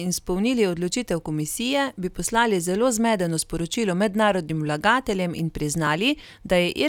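At 4.50 s and again at 5.87 s the speech jumps forward, losing roughly 5 ms and then about 15 ms, with no silent gap. That seamless skip, rather than a brief hole, points to a likely dropped buffer (overrun), overwritten before capture.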